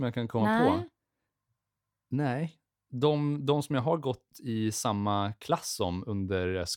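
No faults can be heard anywhere in the speech.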